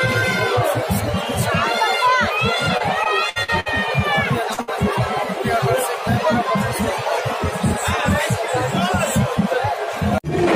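Three kinds of packet loss on a network audio stream break up this 11-second clip. From 2.77 to 3.68 s there is repeated packet loss that gives a robotic sound. Five separate holes add up to about 200 ms, or roughly a fifth of that stretch, and the longest is 63 ms. Each hole is filled by extending the sound just before it, so the passage comes out choppy and robotic. On a spectrogram those patches show as short blocks of frozen, overly regular harmonics or smooth noise. On the waveform they look like suspiciously repetitive cycles between stretches of normal, irregular signal. At 4.54 to 4.59 s comes a short concealed packet loss of about 40 ms. The receiver bridges it with a brief synthetic continuation and then crossfades back into the real signal, which is heard as a quick smear or wobble. It appears as a thin band of smeared, blurred detail on the spectrogram. Almost immediately after, from 4.61 to 4.69 s, a burst of packet loss removes about 60 ms in one run. 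Here the continued sound is faded down as the gap goes on, becoming a held buzz or hiss before the audio picks up again further along with that portion gone. The waveform shows a decaying envelope into the gap. The spectrogram shows frozen or noisy content dimming, then an abrupt resumption.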